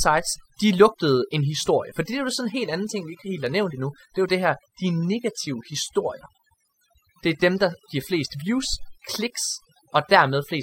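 Overdone noise removal runs through the whole speech recording: bands near the noise estimate are gated away, leaving twinkling specks and a spectrogram with isolated bright dots on black.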